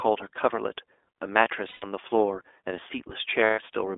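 The whole speech track has passed through the iLBC codec, so it's squeezed into a phone band of roughly 300 Hz to 3.6 kHz with nothing on top, and there's a clearly audible rough, slightly synthetic edge. That character fits the 20 ms-frame, 15.2 kbps mode.

Lost iLBC frames show up twice, from 1.68 to 1.84 s and again from 3.44 to 3.60 s, each gap about 140 ms long. In both spots the decoder fills the hole by repeating the last pitch cycle with noise mixed in, so you hear a held, faintly buzzy vowel. The voice snaps back right after each one.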